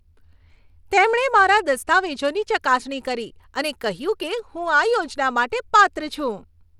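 A speech clip with plainly audible codec damage from start to finish. The treble flickers and drops out, and a gritty noise with aliasing rides on the sound, though nothing sits above 21 kHz. The likely cause is Bluetooth SBC compression, consistent with a starved bit pool near 96 kbps.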